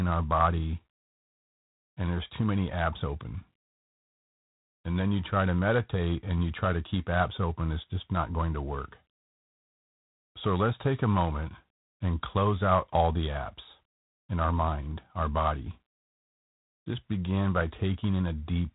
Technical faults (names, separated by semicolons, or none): G.726 ADPCM